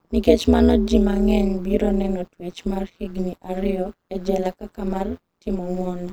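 From start to finish the speech carries overlap-add ripple. It sounds like the audio was chopped into windowed frames and stitched back together with an overlap that doesn't add up to a steady gain, so the level dips and swells once per frame. The swing is huge, about 60 dB, at roughly 150 Hz, so you get a harsh, metallic buzz with extra tones grinding through every syllable.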